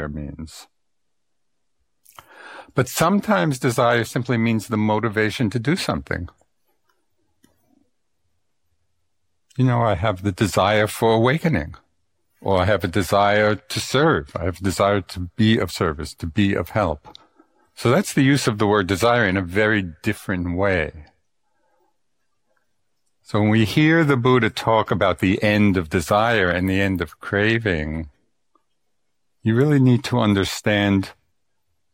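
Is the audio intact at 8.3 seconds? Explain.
Yes, at 8.3 seconds the speech plays through intact, with no dropout, glitch or other fault at that moment.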